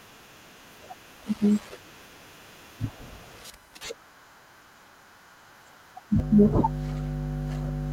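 Mains hum enters this speech recording at 6.20 s and continues to the end, a steady 50 Hz tone with low harmonics sitting only about 5 dB below the speech. It comes from the power line coupling into the signal through a ground loop or nearby transformer.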